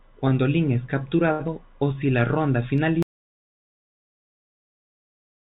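At 1.32 s there is a short stall from a late packet. It runs to 1.41 s. A packet arrived late and the jitter buffer ran dry. The receiver held the last sound for 72 ms until the packet came. Then it resumed from the same point. Nothing is lost. A sound is drawn out too long, with a faint buzz or dip. The playout delay grows by 72 ms here.

From 1.47 to 1.50 s comes a short concealed packet loss. About 40 ms of audio never reached the decoder in time. The receiver covered only 9 ms of it by extending the previous sound, then blended back into real audio. The rest is simply skipped, so the delay shrinks by roughly 30 ms. It is heard as a brief smear or wobble. A short consonant may vanish.

Between 1.73 and 2.07 s there is a jitter buffer slow-down. The buffer needed to rebuild its reserve. So the receiver repeated single pitch periods and slivers of pause, again and again. This adds 41 ms. 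The speech plays at 90 percent speed with no change in pitch. Sounds stretch out. It ends just before "la ronda".

At 3.03 s, right after "la ronda", there is an audio dropout to silence. The sound cuts off abruptly mid-flow. What follows is silence, with no room tone at all. It lasts to the end of the clip. The cause is likely a lost input, such as a disconnected device, a failed link or an accidental mute. Whatever came after is gone.

Across the clip, the call path's G.711 mu-law coding leaves nothing above 4 kHz.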